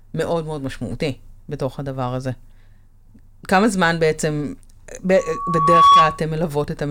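From 5.16 s a single steady tone near 1.1 kHz rises out of the speech, swelling over most of a second into a piercing whine that ends up roughly 10 dB louder than the speech and cuts off at 6.22 s. This is loudspeaker feedback squeal. The microphone was picking up the loudspeaker it fed, and around 1.1 kHz the loop's gain exceeded one, so that frequency kept reinforcing itself.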